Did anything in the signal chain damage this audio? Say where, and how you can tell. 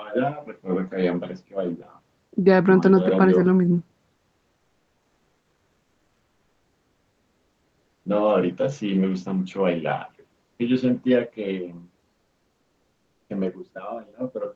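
Yes. Comfort noise in place of the background at 10.43–10.59 s and 12.09–13.29 s: the pauses lose their room tone to a flat, featureless hiss, about 14 dB and about 2 dB quieter. This is likely Opus discontinuous transmission in the call codec, which stops sending during silence while the receiver synthesises noise.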